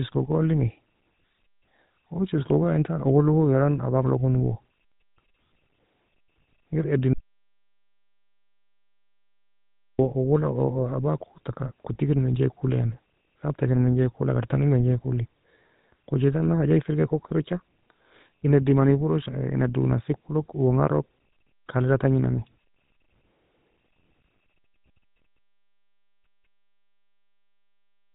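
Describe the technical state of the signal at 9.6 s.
At 9.6 s you're right in the middle of an audio dropout to silence, which runs from about 7.13 s to 9.99 s, so close to 2.9 s of the speech is simply gone. It's plain silence, not quiet room tone. The input was most likely lost for a moment, a disconnected device, a broken link or an accidental mute, while the recorder kept writing silence. Whatever was said there can't be recovered, and the speech comes back abruptly just before the 10 s mark.

The whole clip also runs through the GSM full-rate codec, so even at the edges of that gap the speech has the buzzy, gravelly texture you get when a vocal-tract model is driven by sparse, regularly spaced pulses. The damage is plainly audible, and nothing survives above 3.9 kHz, which fits the old 13 kbps mobile codec. Higher voices come off worst with this kind of coding.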